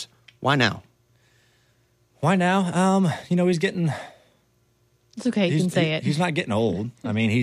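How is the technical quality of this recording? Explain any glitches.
Nothing in the recording stood out as a technical problem on listening, so there are no glitches to explain.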